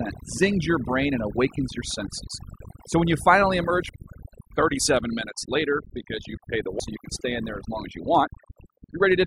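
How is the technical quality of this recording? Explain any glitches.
The technical quality is poor, with heavy processing throughout and two playback discontinuities.

Overdone noise removal affects the whole clip. An aggressive noise reducer pulled individual frequency bands down or out wherever they sat near its noise estimate, taking quiet parts of the speech with them. The background drops and breaks up into twinkling specks.

A CD skip occurs at 3.89 s, right after "when you finally emerge", and again at 6.80 s, after "because you pay the". Each time the laser jumped to another turn of the disc's spiral. The player mutes for a few milliseconds, leaving a tick, and the audio then resumes abruptly from a different point.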